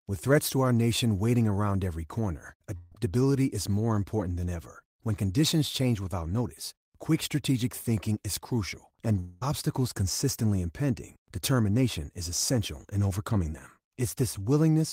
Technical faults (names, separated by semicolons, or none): burst of packet loss; long network dropout